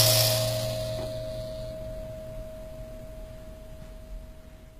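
A short music clip with plainly audible codec damage running the whole way through, likely HE-AAC compression at a low bitrate, something like 20 kbps. The treble sounds rebuilt from copied lower bands rather than real, so it comes out gritty and metallic, and nothing survives above 14.9 kHz.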